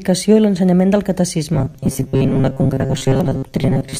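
From about 1.54 s to the end, the speech turns into a rigid, metallic buzz pitched at 134 Hz, a robotic sound from repeated short buffers. Audio likely arrived too seldom, so roughly 70% of that stretch is the same short slice looping while real sound gets skipped.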